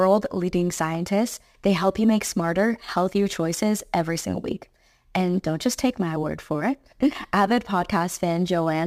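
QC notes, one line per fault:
Throughout: crude rate conversion. The speech carries a gritty, inharmonic fizz that rides on the louder and brighter syllables and drops away in pauses. The audio was moved from 44.1 kHz to 48 kHz by simply repeating the nearest sample instead of filtering, so the waveform gets small steps on a fixed 147-to-160 cycle. Those step errors fold into tones unrelated to the voice, sitting roughly 25 dB below the signal, loud enough to hear as grit.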